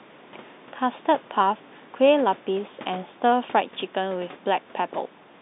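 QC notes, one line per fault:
No faults to note.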